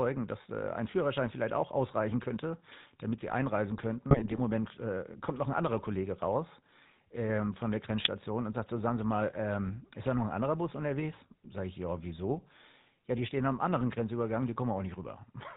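From start to finish the speech carries the buzzy, gravelly roughness of the GSM full-rate codec, plainly audible and consistent with the 13 kbit/s GSM full-rate coder. The vocal tract is modelled as a filter driven by a sparse train of regularly spaced pulses, so the natural breathy texture is replaced by a grainy buzz. On a spectrogram the energy stops abruptly at 4 kHz.

From 4.10 to 4.39 s the speech breaks into squawks and gargling from GSM bit errors. Flipped bits in the decoder's filter, pitch and gain values distort the spectrum and throw the level around from one short frame to the next, in a pattern that fits roughly a dozen or more 20 ms frames being hit. The waveform shows jagged bursts and sudden level jumps across this stretch. On the spectrogram, blocky vertical bands of misplaced energy interrupt the normal formant pattern. At 8.00 to 8.08 s a second, shorter burst of GSM bit errors produces a quick pop and squawk, probably from only a handful of corrupted frames. 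It appears as a brief spike in the waveform and a narrow smear on the spectrogram.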